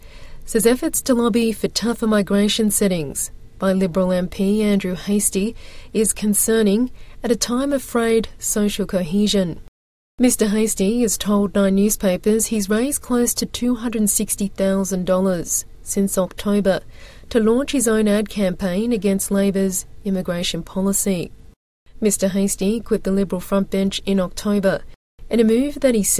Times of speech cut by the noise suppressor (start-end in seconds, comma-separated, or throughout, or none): none